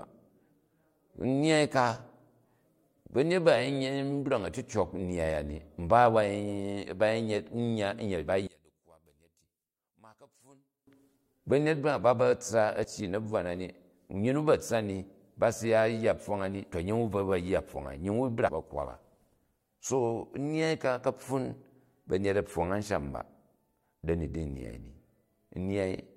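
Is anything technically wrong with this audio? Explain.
Yes, there are two kinds of fault in this speech clip.

From 8.47 to 10.87 s the speech drops by about 28 dB to a faint copy. The likely cause is one channel inverted: reversed polarity cancels the centred content when both channels are summed to mono, leaving only their faint difference.

Damaged data in a compressed stream appears at 12.84 s and again from 18.47 to 18.49 s. Corrupted bytes make the decoder misread frames and lose sync while it searches for the next header, so each spot is a brief chirp or blip.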